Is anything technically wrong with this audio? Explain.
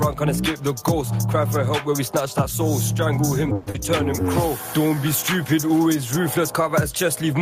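Yes. From 3.55 to 3.76 s the sound smears into a buzzy continuation, then resumes with roughly 100 ms gone, likely a long network dropout concealed by the receiver.

From 4.78 to 5.01 s the sound drags at unchanged pitch, running at 83% speed. This is a jitter buffer slow-down, where repeated pitch periods added 46 ms of reserve.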